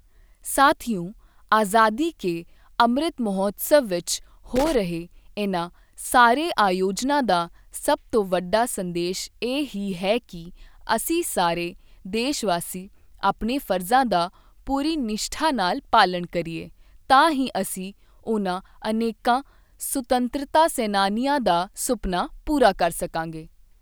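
A speech clip carrying one burst of loose connector crackle, from 4.56 to 4.75 s, just after "ਕੇ ਅੰਮ੍ਰਿਤ ਮਹੋਤਸਵ ਵਿੱਚ" and before "ਰਹੇ ਇਨ੍ਹਾਂ ਸਾਰੇ ਆਯੋਜਨਾਂ". For about a fifth of a second, a worn or dirty contact rapidly makes and breaks, chopping the signal into irregular scratchy crackle. On a waveform this shows as ragged dropouts and sharp spikes; on a spectrogram, as scattered vertical broadband streaks smeared across that short stretch.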